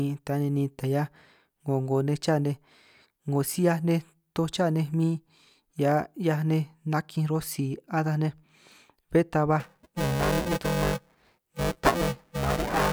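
From 9.60 s to the end, buffer tearing sets in. Writer and reader of the ring buffer have slipped. Part of each period replays audio about 10 ms old, with hard joins. The speech gains a robotic 345 Hz buzz, which fits a 128-sample buffer.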